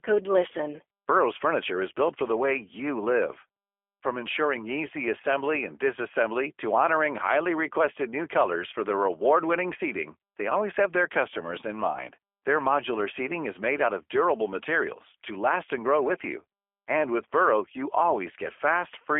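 Throughout, the speech carries G.729 codec damage, which fits an 8 kbit/s VoIP link. The band runs from 300 Hz to 3.4 kHz with nothing above 3.6 kHz. Unlike plain telephone filtering, the rebuilt voice sounds plainly rough and synthetic rather than simply muffled.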